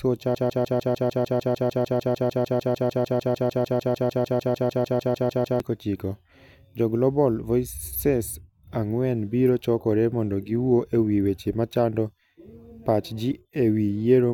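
A broken-record loop runs from 0.35 s to 5.60 s in this speech clip: a fragment about 0.15 s long repeats exactly, back to back, 35 times, instead of continuous speech. The likely cause is a player, encoder or stream that stalled and kept resending the last piece it held, so the speech that belonged in those five seconds never plays.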